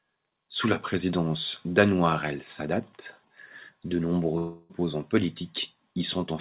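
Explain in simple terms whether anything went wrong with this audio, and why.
Something did go wrong. From 4.38 to 4.71 s, the speech turns into a smeared, fading buzz. This is likely a long network dropout. About a third of a second of audio never arrived, so the receiver stretched the last sound to fill the gap.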